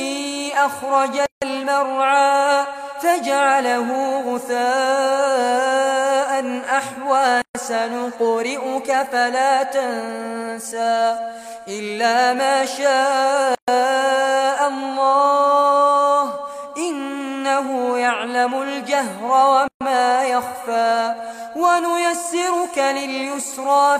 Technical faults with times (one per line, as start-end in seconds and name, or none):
1.26-1.42 gap at a join of encoded pieces
7.42-7.55 gap at a join of encoded pieces
13.55-13.68 gap at a join of encoded pieces
19.68-19.81 gap at a join of encoded pieces